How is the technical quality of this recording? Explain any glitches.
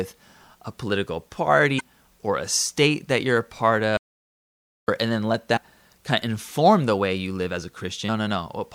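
The recording has two kinds of fault: three short bursts of damaged compressed data and one stretch of dead silence.

Damaged data in a compressed stream appears at 1.77–1.81 s, after "a political", at 5.56 s, after "and then let", and at 8.05–8.09 s. Corrupted bytes make the decoder misread frames and resynchronise on the next header.

An audio dropout to silence runs from 3.97 to 4.88 s, between "that you're a part" and "and then let". About 0.91 s of speech is lost to silence with no room tone, most likely because the input signal was interrupted while recording continued.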